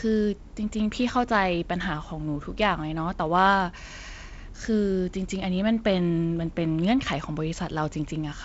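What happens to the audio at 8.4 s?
Nothing goes wrong at 8.4 s: the speech runs on intact through that moment, with the G.722 wideband coding's light upper-band hiss and the band limit of about 7.7 kHz.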